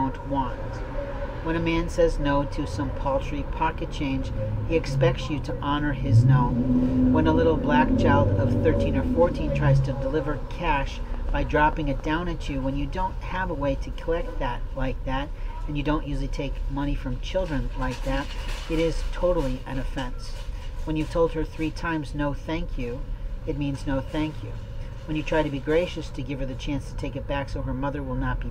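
From 11.14 to 12.06 s there's a train of clicks, about seven uneven pops at around 5.5 per second, roughly as loud as the sound itself, likely from nearby interference.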